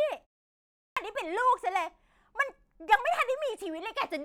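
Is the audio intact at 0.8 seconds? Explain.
No. At 0.8 seconds the audio falls inside a clipped start after a pause, running from 0.54 to 0.97 s. A pause of about 0.36 s comes just before it. During that silence the output device drops into a sleep state. When sound resumes, the device needs time to wake and lock again. About 425 ms of speech is swallowed. The speech then begins abruptly out of silence, missing its opening sounds.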